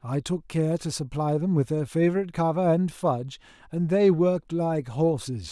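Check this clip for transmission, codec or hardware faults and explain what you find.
Nothing in this speech recording points to a fault. There is nothing to flag at any point in the clip.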